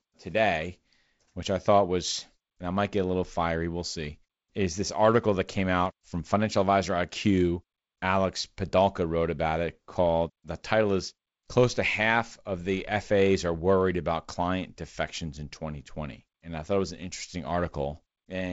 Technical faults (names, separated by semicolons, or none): none